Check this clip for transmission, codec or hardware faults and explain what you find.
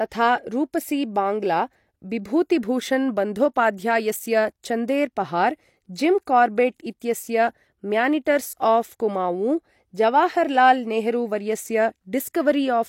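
The clip has one codec fault, pre-echo, heard twice. At 6.25 s and 7.00 s, a brief hiss of about 18 ms precedes a sharp attack. Block-wide quantisation noise leaks ahead, softening each onset.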